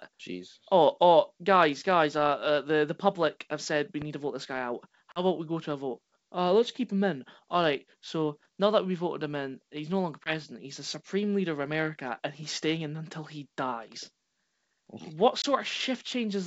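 At 4.02 to 4.05 s, between "public have said we" and "to vote this guy", a single loud pop stands a few decibels above the speech, which carries on beneath it. It is most likely a voltage pulse from a plug, switch or static discharge, added on top rather than removing anything.

The packet loss on this ADPCM call does the opposite and cuts the sound out. At 5.12 to 5.22 s, after "vote this guy out" and before "about we go to", there is a hard-edged gap of about 40 ms, which fits two 20 ms packets. Then the speech returns slightly distorted while the decoder's predictor and step size catch up. Shorter single-packet holes of about 20 ms follow at 10.24 to 10.32 s, after "in he's no longer", and at 15.42 to 15.45 s.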